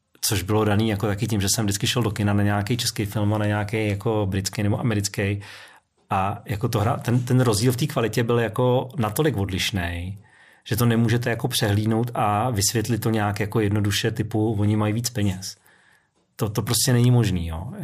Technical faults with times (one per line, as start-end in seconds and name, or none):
none